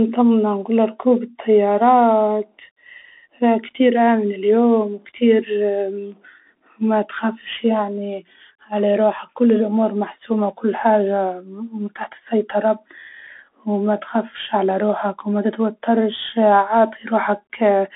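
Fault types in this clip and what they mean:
Bluetooth CVSD headset codec: The speech sounds boxed into a telephone band of roughly 250 Hz to 3.5 kHz, nothing above about 3.7 kHz, with scratchy s sounds and a granular hiss underneath. This fits a 64 kbps one-bit delta coder whose adaptive step cannot keep up with sharp, loud high content.
Bit error spike: Two isolated, sharp ticks, one at 6.12 s and one at 11.00 s, sound broadband and unrelated to the speech. Each points to a flipped bit in the digital stream that briefly throws the waveform by a power of two, the second spanning apparently two samples.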